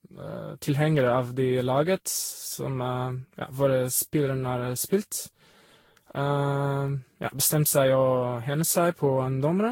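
From start to finish the speech carries a swirly, hollow smear, with consonant attacks blurred and nothing above 16.6 kHz. This is generation loss, likely from re-encoding around ten times with a lossy codec at a moderate rate, consistent with Vorbis near 60 kbit/s. Each pass quantises on a shifted frame grid, so noise and spectral holes pile up. A single encode at that rate would sound cleaner, with steadier, less watery artefacts.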